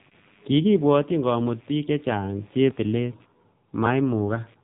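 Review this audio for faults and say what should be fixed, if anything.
Computer activity noise runs through the whole recording. A buzzing chirp pulses at around 100 times per second, roughly 35 dB below the speech. Processor or graphics load is shifting the shared ground of the audio circuit, and the noise follows that activity, not the talker. Power the interface separately or use a ground-isolated USB connection to prevent it.

AMR narrowband mobile codec damage is also present from start to finish. Nothing passes above 3.8 kHz, so the speech sounds muffled and telephone-like. The damage is heavy. The voice is buzzy and synthetic, which points to a low mode near 6.7 kbps. The pulse-driven vocal-tract model cannot carry the detail at that rate. Record or send the audio over a wideband or uncompressed path to prevent it.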